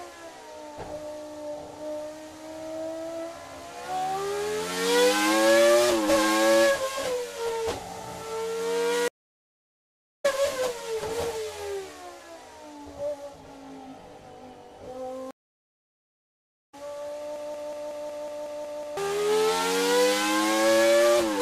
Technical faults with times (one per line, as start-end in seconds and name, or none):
9.08-10.26 stream reconnect
15.31-16.75 stream reconnect
17.36-18.97 broken-record loop